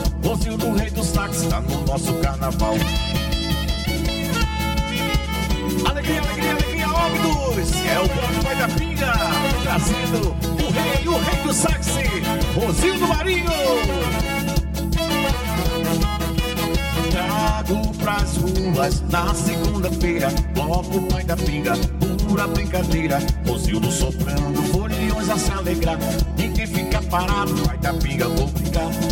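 From start to finish the audio has channel delay (comb filtering): one channel trails the other by roughly 5 ms, so the mono sum cancels at evenly spaced frequencies from around 100 Hz upward, sounding hollow and phasey. Unlike flanging, these notches stay fixed and never sweep.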